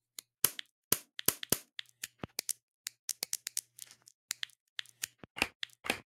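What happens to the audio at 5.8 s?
At 5.8 s the sound carries on intact, with no dropout, click, distortion or other fault at that point.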